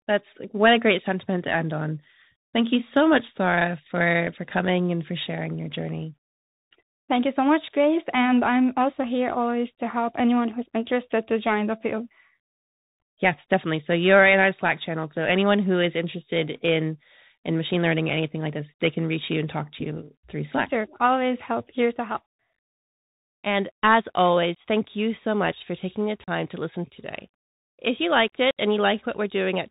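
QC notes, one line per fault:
Throughout: Bluetooth CVSD headset codec. The speech is carried as one up-or-down bit per sample at 64 kbps with an adapting step, so nothing above 4 kHz survives; loud high sounds outrun the step and distort, s sounds turn scratchy, and a granular hiss sits underneath.
24.55 s, 26.24 to 26.29 s, 28.51 to 28.58 s: unconcealed Bluetooth headset packet loss. Gaps of 15 ms before "thank you so much", 37.5 ms between "much for taking the" and "to listen today", and 60 ms after "you liked" drop out with abrupt edges. Each points to a short run of lost link packets, and the speech returns briefly quieter as the CVSD step recovers.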